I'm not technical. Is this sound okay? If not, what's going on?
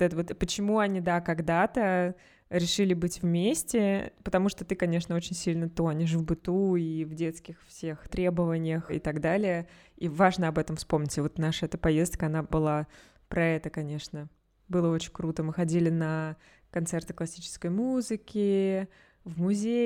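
Yes, nothing in this speech recording points to a technical fault, so there's nothing to fix.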